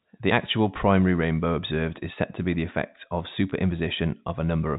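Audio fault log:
3.50–3.52 s, packet loss with pitch repetition: just after "be the effect of", about 20 ms of audio goes missing, which fits a single lost packet. The receiver bridges the gap by repeating the last pitch period. The sound briefly holds with a slight buzz, then resumes.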